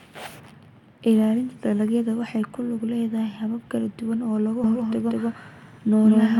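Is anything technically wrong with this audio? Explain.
Yes. From 4.64 s through to the end, the speech picks up a doubled audio track: a second, full-strength copy trails the original by roughly a fifth of a second. It's likely a second capture path running slower, or an edit that left two copies out of step. It sounds like a hard, dry slapback, with every syllable landing twice and no room tail, and it kicks in abruptly rather than fading up.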